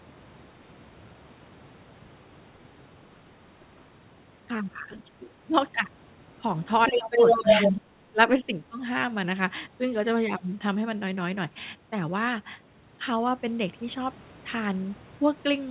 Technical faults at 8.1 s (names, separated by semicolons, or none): speech suppressed in double talk